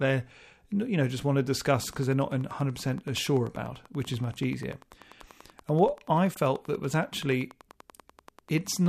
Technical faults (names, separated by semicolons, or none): train of clicks; corrupt frame decoded